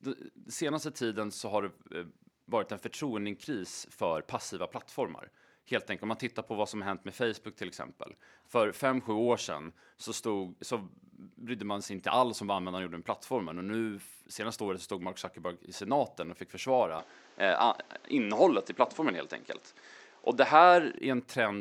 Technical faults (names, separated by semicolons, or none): input switched to a poorer device